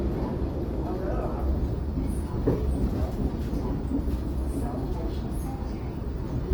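From start to finish the sound has a grainy, rough texture, with tones smeared into noise rather than swirling. That's likely Opus compression in its music mode, which fits about 24 kbps: bands get filled by folding or noise, yet the top stays open to about 20.3 kHz.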